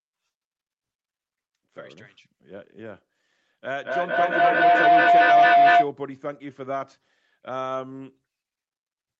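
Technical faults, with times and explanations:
3.63–5.96 s, feedback howl: two devices in one room are on the same call, so each trip through mic and speaker adds gain. It narrows to a tone near 700 Hz, repeating roughly every fifth of a second, and peaks about 13 dB above the speech.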